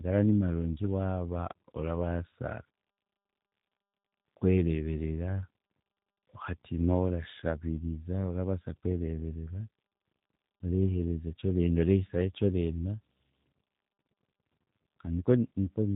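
Throughout, the speech suffers tandem speech coding: it crossed CVSD at 64 kbit/s, then G.711 A-law, then G.729A at 8 kbit/s, each coder re-encoding the previous one's degraded output. The compounded damage sounds rough, muffled and warbly, with nothing above 3.8 kHz.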